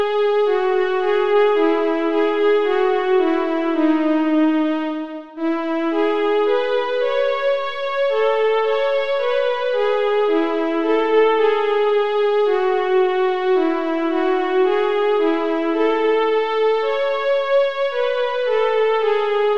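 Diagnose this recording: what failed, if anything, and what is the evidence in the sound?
Nothing failed; no stage shows any audible fault.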